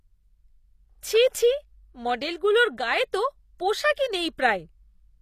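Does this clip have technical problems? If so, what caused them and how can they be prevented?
Yes. The speech was likely squeezed through HE-AAC compression at a very low rate, consistent with about 24 kbps. The encoder coded only the lower spectrum and rebuilt the treble by copying lower bands upward under a rough envelope. Across the whole clip the top end sounds bright but synthetic, s sounds come out gritty and lispy, and nothing survives above about 14.9 kHz. Encoding at a higher bitrate with plain AAC or a lossless format would prevent this.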